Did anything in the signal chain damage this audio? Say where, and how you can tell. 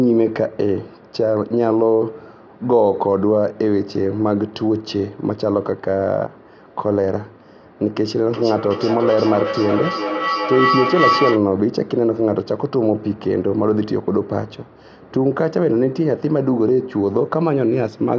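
Yes. From 8.26 to 11.47 s a tone around 1 kHz swells, pulsing roughly every 0.4 s, until it is about as loud as the speech. This is feedback howl in the call stage: two devices in one room keep re-amplifying each other's output until it is cut off.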